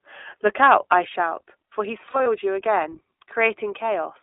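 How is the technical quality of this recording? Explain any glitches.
The technical quality is limited: the whole clip carries audible low-bitrate codec coloration, one stretch near the start shows clipping, and a short dropout occurs in the middle.

iLBC codec, throughout: The sound is confined to a narrow telephone band, about 300 Hz to 3.6 kHz, with a rough, slightly synthetic grain that fits iLBC's 15.2 kbps mode with 20 ms frames. Each frame's excitation is coded on its own, so the fine texture loses continuity. On a spectrogram, energy stops sharply at the upper band edge, nothing appears below 300 Hz, and harmonics look smeared and blocky.

Microphone overload, 0.46 to 0.94 s: The loudest moments, just before "I shout for he's", take on a harsh, crackly edge. The likely cause is input gain set so high that peaks overshot the converter's limit by about 4 dB. Their tops were sheared off, with around one percent of samples clipped. 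The waveform shows flat-topped peaks, and a spectrogram shows faint broadband streaks above the harmonics at those peaks.

Lost iLBC frames, 2.06 to 2.28 s: Between "I shout for he's" and "you again", short patches turn into a held, buzzy, breathy tone. The decoder filled missing packets by repeating the last pitch cycle blended with noise. The losses are scattered over about 200 ms, totalling roughly 100 ms, which fits about five frames, with the longest run a few tens of milliseconds. Because each frame decodes independently, the voice is right again almost at once. A spectrogram shows frozen, repetitive harmonic bands there, and the waveform shows repeated cycles.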